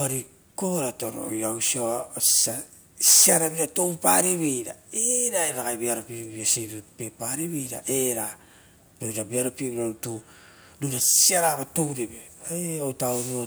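No technical faults can be heard anywhere in the recording.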